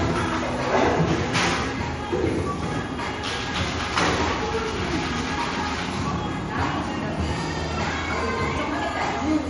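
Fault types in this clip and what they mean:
MP3 compression: throughout the clip, the sound has nothing above about 11.1 kHz and plainly audible coding damage, likely from MP3 encoding at a low bitrate near 45 kbps. Short of bits, the encoder divides the audio into many narrow frequency lines, discards the top band at a fixed cut-off and drops quieter lines whenever its hearing model judges them masked. That leaves a dull, band-limited result with clearly audible artefacts across the whole recording.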